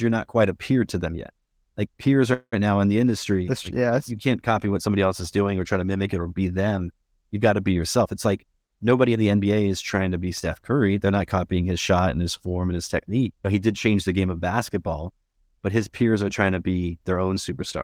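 At 2.33 s the sound stalls until 2.54 s: the last instant is drawn out as a buzzing tail that fades and ends in about 80 ms of silence. This is a call audio freeze, most likely caused by packets arriving late so the jitter buffer ran dry. Unlike a dropout, where sound is lost, the audio resumes exactly where it stopped. Nothing is missing; a 190 ms pause has simply been inserted.

From 8.0 s to 9.53 s the sound hurries at roughly 112% of normal speed while its pitch stays where it was. This is a jitter buffer speed-up. The receiver was holding too much delay, so it repeatedly trimmed short pitch-period-length slices, removing about a fifth of a second in total. Resampling would raise the pitch along with the tempo, but here only the tempo changes.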